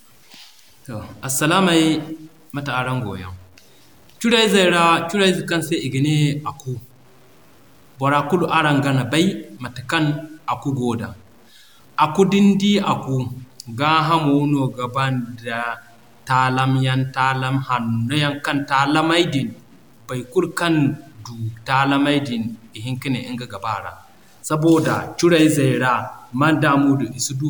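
From start to finish the speech carries a grainy, gritty edge that rides along with the voice itself, getting rougher as syllables fade and tails break into a crackly sputter instead of decaying smoothly. That's the classic sound of low bit depth without dither. The signal was likely truncated to something like 9 bits with no dither to decorrelate the error. The error noise sits only around 35 dB under the speech.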